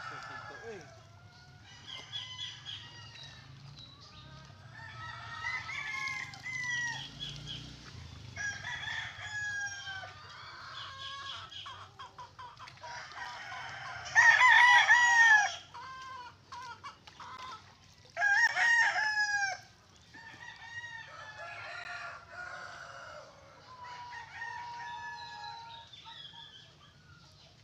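At 13.25 s, 17.37 s, 18.47 s and 21.84 s the audio drops out in a block of digital silence, with gaps of about 5 ms, 15 ms, 15 ms and 13 ms. At each point the sound cuts out and returns without any fade. The 5 ms gap registers as a single tick, while the three longer gaps come across as ticks or brief dips. This pattern points to output buffers that were not filled in time.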